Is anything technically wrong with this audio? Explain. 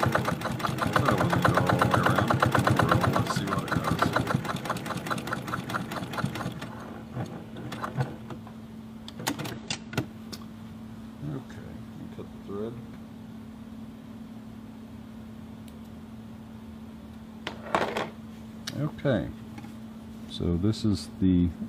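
Yes. Damaged data in a compressed stream, at 9.52–9.58 s, 12.91–12.97 s and 21.51–21.56 s: corrupted bytes make the decoder misread frames and lose sync while hunting for the next frame header, so each spot is a brief chirp, squawk, click or short hole of about 55 ms.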